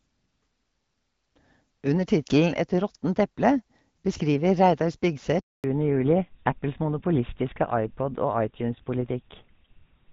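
At 5.40 s a handover gap cuts in: the call was passed between networks and no speech frames arrived while the link switched, so the sound dies within a few tens of milliseconds and stays silent for 240 ms, until 5.64 s. Whatever was said in that stretch is gone. On a waveform this shows as a flat line after a short taper; a spectrogram shows a blank vertical band across every frequency.

From 5.64 s to the end, a fallback to narrowband takes over. Before the gap, the wideband HD Voice link carries speech cleanly, with only light coding damage, which points to AMR-WB at around 12.65 kbit/s. After the switch, the character fits an older GSM full-rate codec at 13 kbit/s, and nothing above 4 kHz survives. The voice turns duller and rougher, with the thin, boxy quality of a traditional phone line. A spectrogram shows energy reaching up to about 7 kHz before the gap and then cut off sharply at a hard ceiling of 4 kHz afterwards.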